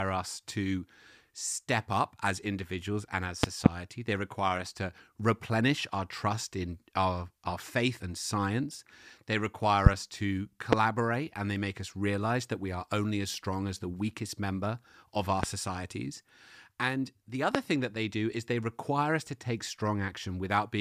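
Loud pops break through the speech from 3.43 to 3.68 s as a quick double pop, then singly at 9.86 to 9.89, 10.73 to 10.75, 15.43 to 15.46 and 17.55 to 17.57 s, each some 20 to 25 dB above the speech. A sudden electrical step or pulse, likely from a connector, switch, static discharge or driver glitch, was added to the signal, giving a sharp thump over the talking, which carries on underneath.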